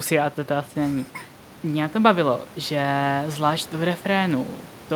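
The speech carries no audible technical faults.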